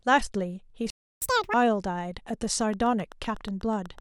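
A playback stall at 0.90 to 1.22 s silences the speech for about 0.32 s, most likely because the player ran short of data or its thread was blocked. A catch-up at higher speed follows from 1.22 to 1.54 s: the backlog is played at double speed, so the speech rushes and jumps nearly an octave higher before settling back. A train of clicks runs from 2.61 to 3.99 s, with around ten sharp, evenly spaced ticks at 8 per second, about as loud as the speech. They are likely from electrical interference or a faulty connection or power supply.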